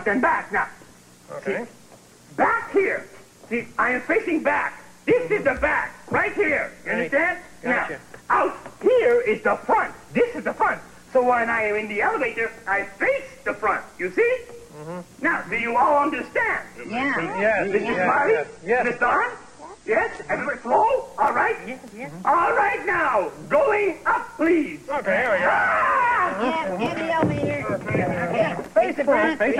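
From 16.85 s to 20.85 s the audio drops to an adaptive stream at a lower bitrate for about 4 seconds. The quality shift is abrupt but seamless, with no gap. Everything above roughly 9.5 kHz vanishes, so the top end goes dull, and codec artefacts creep in. That points to the player falling back from around 96 kbit/s AAC to something near 32 kbit/s while the connection sagged, then stepping back up.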